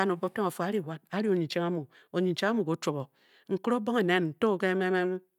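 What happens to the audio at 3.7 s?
At 3.7 s the speech carries on intact, with no dropout, click, distortion or other fault at that point.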